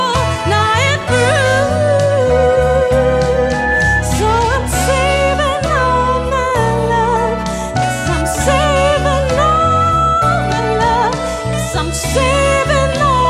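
From 3.34 to 4.04 s, loudspeaker feedback squeal: a 1.7 kHz tone swells over roughly 0.4 s to about signal level, showing as one bright horizontal spectrogram line.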